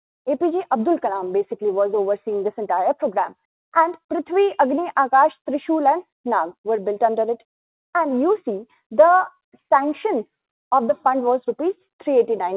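No technical faults can be heard anywhere in the clip, which comes through a G.711 mu-law call path with nothing above 4 kHz.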